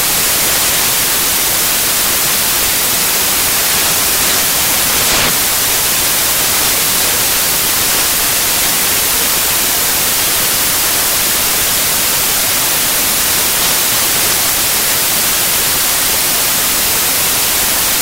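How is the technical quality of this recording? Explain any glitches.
Poor: samples built from the wrong bytes throughout. Misassembled byte order turns fast-changing low bits into dominant values, producing loud noise, close to white on loud sounds.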